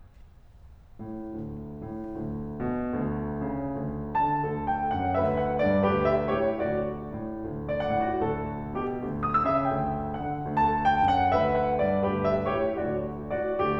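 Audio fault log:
Nothing to log here: the music runs along without a single problem turning up anywhere in it.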